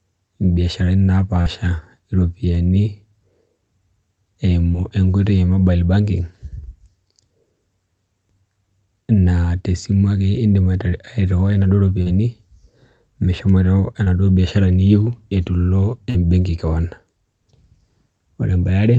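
It's speech over a call link, likely Opus around 32 kbps given its coding grain and 8 kHz top end, with short concealed packet loss at 1.41, 4.73, 12.02 (right after "airhiwai inaduo"), 14.04 and 16.10 s. Twenty to forty milliseconds went missing each time, and the decoder papered over it by extending the preceding sound, leaving brief smears or wobbles.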